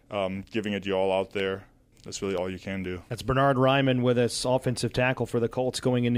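A speech clip with two isolated clicks, at 1.40 s just after "it your all out" and at 2.38 s just before "all you can do". Each is a single sharp tick with a thin vertical line through the spectrum, and no sound goes missing around it. The likely cause is dropped samples: a fraction of a millisecond of the stream vanishes, so the waveform steps abruptly to a later value and that discontinuity produces the click.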